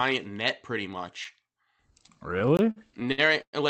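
Speech carried over a call path with Opus coding, band-limited at about 8 kHz, which fits a bitrate around 32 kbps. A block of digital silence hits at 1.25 s, just after "net pretty". It lasts only 5 ms, so it comes across as a sharp tick. A second block runs from 2.57 to 2.59 s. That 20 ms hole is heard as a brief pop and dropout. Both cut hard to silence and back without any fade. The likely cause is output buffers that were not filled in time. Repeated stalls (stutter) also run from 2.39 to 3.55 s. There are eleven separate stalls, and together they stretch the audio by 294 ms. The longest lasts 111 ms, and about a quarter of that stretch is filled-in sound. Late packets kept draining the jitter buffer. Each time, the receiver extended the last sound until the next packet arrived. Nothing is lost, but the speech drags and stutters.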